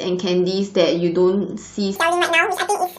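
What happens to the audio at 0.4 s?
Nothing goes wrong at 0.4 s; the speech there plays through intact, with no dropout, click or distortion.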